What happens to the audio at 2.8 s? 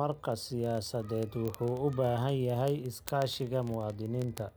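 At 2.8 s the speech carries a fast, steady train of sharp ticks of uneven strength, roughly every 20 ms, part of a run of about two hundred that lasts from 0.12 s to 4.56 s. These are word clock ticks: the receiving device runs on its own clock, unlocked from the sender's, drifting by roughly 0.1 percent. Each time the two clocks slip past each other, a few samples are misread and a single sample is dropped or repeated.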